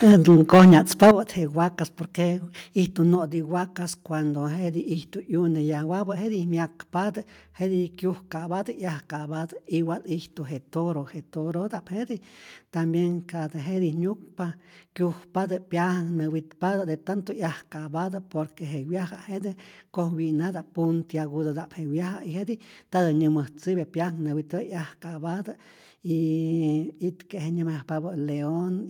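From 0.06 to 1.11 s the opening speech is distorted by microphone overload: a harsh, crackling edge sits on the loudest syllables, with peaks driven about 6 dB past full scale and roughly a tenth of the samples flattened. This is likely an input volume set too high, so the analogue-to-digital converter runs out of headroom and slices off the waveform tops, adding dense high harmonics.

Three abrupt drops in level occur, each a microphone volume step-down: at 0.12 s by about 4 dB, at 1.11 s by about 9 dB, and at 3.15 s by about 3 dB. Voice and background fall together in a single jump rather than a fade. The likely cause is the call software reacting to the clipping and cutting the device's input volume in discrete steps. The largest step coincides with the end of the distortion.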